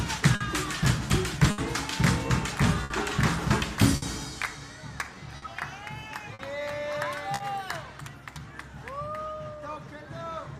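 Clock drift between sender and receiver runs the whole way through. The sender's clock is about 5% slow, so the receiver's buffer keeps draining and small hiccups crop up unevenly. The first clear sign is a short stall from a late packet at 0.35 to 0.42 s: the buffer ran dry, the last sound got held for 50 ms, then playback picked up where it left off with nothing lost. From 1.39 s to the end there are repeated timing corrections, with the receiver stretching things to 99% speed and padding in something like 150 ms overall. More late-packet stalls land at 1.51 to 1.60 s (70 ms held), 2.84 to 2.92 s (60 ms) and 3.96 to 4.04 s (60 ms), each a brief smeared hold or dip. Between 5.37 and 7.42 s come scattered short gaps, around three of them, the longest about 50 ms. Each got patched by carrying the last sound forward, so you get quick ticks or smears rather than dropouts.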